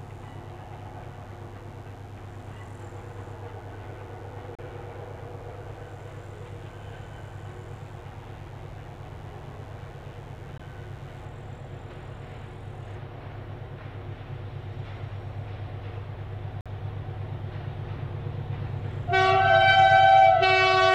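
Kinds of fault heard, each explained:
Mains buzz: A raspy 50 Hz buzz with harmonics from switching spikes, sitting roughly 35 dB below the signal, runs from the start to 11.25 s.
Gap between stream segments: Timestamp mismatches at segment joins insert hard-edged silences of 34, 17 and 48 ms at 4.55, 10.58 and 16.61 s, every 6 s.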